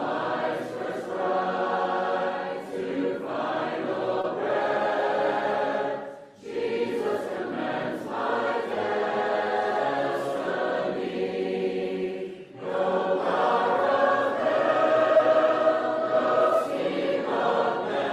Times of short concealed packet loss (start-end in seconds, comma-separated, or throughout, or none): 4.21-4.25, 15.17-15.21